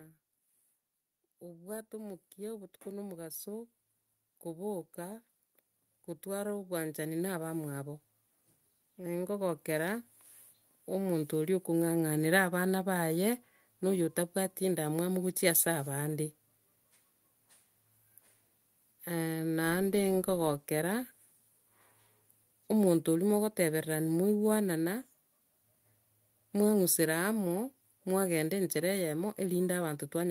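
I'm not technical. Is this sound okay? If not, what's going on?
No. From 1.4 to 11.3 seconds, automatic gain rising is happening: the recording system decided the input was too quiet and kept turning its own volume up. The speech and the background noise swell louder together, creeping up over those ten seconds.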